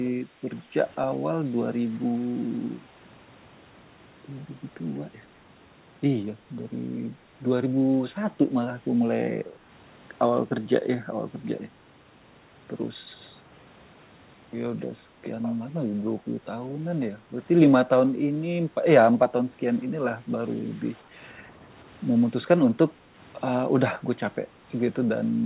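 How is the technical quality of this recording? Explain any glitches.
There are two short glitches in this speech recording, both of the same kind, and the audio is band-limited with nothing above 4 kHz, which fits a narrowband call codec such as G.711.

The background is gated by the echo canceller at 0.27–0.41 s and again at 21.04–21.15 s. The canceller clamps the mic while it thinks the far end is playing, so the room tone dips by about 8 dB and then about 7 dB, each for a brief moment, before coming straight back.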